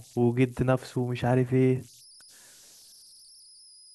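Throughout the speech, converter idle tones are present: a faint whistle around 5 kHz, sitting about 29 dB below the signal, heard most clearly in the pauses and as a grainy layer under quieter passages. The cause is a delta-sigma converter running without dither. When its input is small, the modulator settles into a repeating bit pattern, and that cycle produces a tone whose pitch is set by the small offset at its input.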